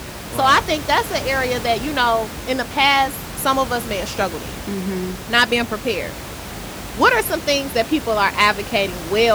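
Nothing stood out on listening to this speech, apart from a room noise sitting about 12 dB below the voice, which belongs to the recording itself.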